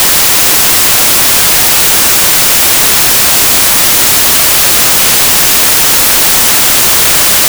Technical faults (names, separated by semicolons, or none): samples built from the wrong bytes